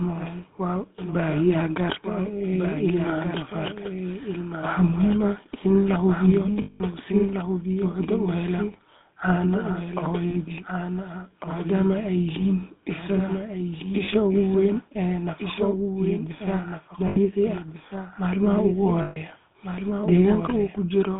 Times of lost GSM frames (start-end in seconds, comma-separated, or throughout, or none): 6.62-6.81, 10.30-10.35, 14.04-14.09, 17.08-17.17, 19.02-19.17